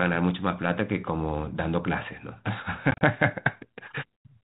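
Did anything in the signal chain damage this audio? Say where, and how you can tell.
Yes, network packet loss on an ADPCM call: hard silent gaps totalling 70 ms from 2.91 to 3.02 s knock the decoder's predictor out of step.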